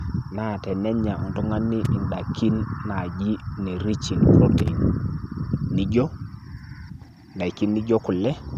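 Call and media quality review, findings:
Loose connector crackle, 1.85–1.87 s: short scratchy burst, about 23 ms. Probable component is a worn or dirty jack or cable contact briefly making and breaking, chopping the signal into irregular clicks.

Loose connector crackle, 4.58–4.69 s: longer crackle of about 105 ms. Same intermittent contact. Any DC on the line would add pops at each break. Recommend reseating or replacing the connector.

Lost LE Audio frames, 7.56 s: brief noisy smear replacing the signal for about 10 ms, which fits a single dropped 10 ms frame on the Bluetooth LE Audio link. The LC3 decoder filled the gap by reusing the previous spectrum with randomised signs. The loss was too short for audible fade-out.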